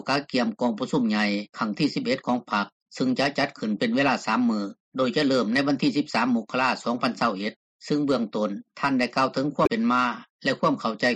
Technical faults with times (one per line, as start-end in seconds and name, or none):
0.00-11.15 MP3 compression
9.63-9.69 damaged data in a compressed stream